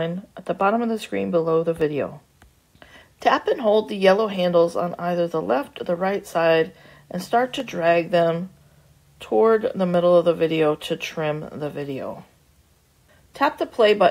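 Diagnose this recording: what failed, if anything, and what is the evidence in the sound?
Four isolated sharp clicks at 0.61, 1.81, 7.60 and 9.94 s, each a thin vertical line across the spectrum, point to dropped samples, likely at the driver or buffer stage. A fraction of a millisecond goes missing each time, so the waveform jumps to a later value.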